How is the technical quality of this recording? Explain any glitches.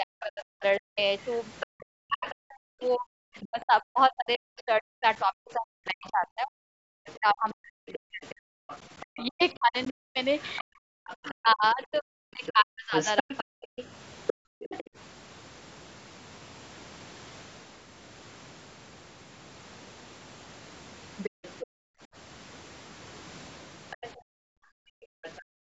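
The recording has clear echo-cancellation problems on a call, concentrated in the first 15 seconds and returning near the end.

Speech suppressed in double talk affects 0.00 to 13.67 s. The talker's speech repeatedly sinks, sometimes by as much as 40 dB, for around ten seconds in total. The likely cause is the canceller treating simultaneous talk from both ends as echo and attenuating everything. On a waveform the envelope shows ragged troughs. A spectrogram shows the speech harmonics thinning or vanishing in patches.

The other side's voice leaks through at 0.21 to 3.64 s, 6.06 to 14.84 s, 21.23 to 21.64 s and 23.90 to 25.42 s. A second, quieter voice sits under the talker, roughly 10 to 20 dB down and loudest in the long middle stretch. This is likely loudspeaker playback reaching the microphone and only partly removed. A spectrogram shows a faint second set of harmonic striations that do not follow the talker's pitch contour.

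Background gated by the echo canceller occurs at 14.34 to 14.96 s, 21.30 to 22.09 s and 24.17 to 25.65 s. While far-end audio plays, the room tone drops by about 39 to 40 dB and then recovers. This is the canceller clamping the microphone during playback. The three gaps last roughly 0.4 s, half a second and one and a half seconds. The waveform flattens to near-silence in those spots, and the spectrogram shows the broadband noise floor, which stops at 8 kHz, going dark.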